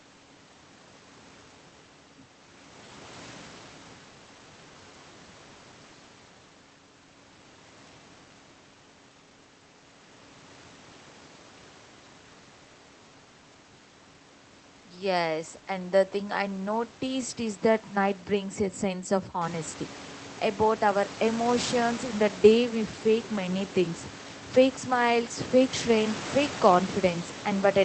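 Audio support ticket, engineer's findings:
Findings: no fault found in this speech audio; the room noise rises by about 12 dB near 19.5 s but stays well under the speech, and that comes from the room, not the system.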